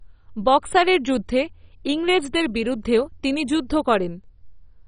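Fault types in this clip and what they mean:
MP2 compression: The speech sounds dull and gurgling, with a granular, watery roughness and nothing above about 10.4 kHz throughout. This is likely heavy MPEG Layer II coding, starving sub-bands of bits so upper bands drop out and others flicker, pointing to roughly 32 kbps.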